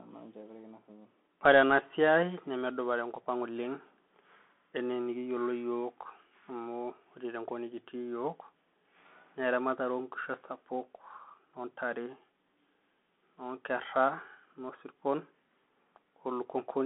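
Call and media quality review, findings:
Bluetooth CVSD headset codec, throughout: nothing above 3.8 kHz on spectrogram, sibilants scratchy, granular hiss floor; one-bit delta steps lagging loud highs, fits a 64 kbps headset link.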